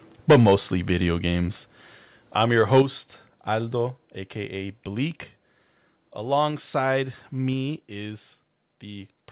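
A speech recording, carried over a call path whose sound stops at 4 kHz, which fits narrowband G.711 at 64 kbps. It has two microphone overload events. The first runs from 0.3 to 0.54 s, just before "video games". Peaks there go about 11 dB past the limit. A large share of the waveform is flattened, and the syllables take on a harsh, crackling edge. The second runs from 2.73 to 2.82 s, right after "I'm your". It is milder, at about 3 dB over, with a smaller share of samples cut. The likely cause is input gain set too high, so loud peaks hit the converter's ceiling and lose their tops. The level also drops abruptly five times, each a microphone volume stepped down event. The steps are at 0.31 s (about 3 dB), 2.82 s (about 7 dB), and 3.87, 6.51 and 7.53 s (about 2 dB each). Voice and background fall together at each step. The first comes during the first distorted peak, and the second straight after the second. 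That pattern points to call software likely cutting the device's input volume in one jump each time it detected clipping or excess level.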